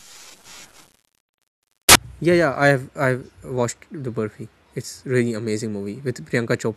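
From 0.0 to 1.95 s the speech carries loud, harsh noise, close to white on loud sounds, the signature of samples built from the wrong bytes. The reader assembles each sample with its bytes misordered or misaligned, so the rapidly fluctuating low-order bits land in the most significant position. Unlike ordinary hiss or clipping distortion, this noise comes from the sample values themselves being scrambled, and it vanishes abruptly at 1.95 s.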